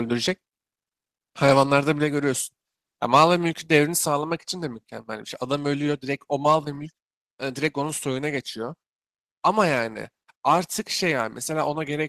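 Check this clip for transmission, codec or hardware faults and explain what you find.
One fault stands out. At 4.08 s a microphone volume step-down drops the speech and background together by about 3 dB, likely the call software lowering input gain; the waveform envelope shrinks abruptly there.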